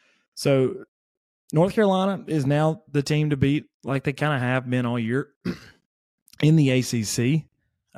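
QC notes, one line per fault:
No faults found.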